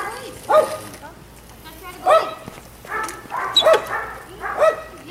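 A small forward jump in the sound lands at 2.06 s, and another at 3.66 s, with no gap of silence at either. Each is likely a dropped buffer (overrun): a block of samples, roughly 5 ms and then 10 ms, was overwritten before being read, so the audio either side butts together.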